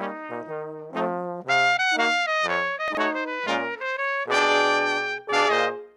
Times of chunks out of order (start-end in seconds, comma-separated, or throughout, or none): 2.88-2.97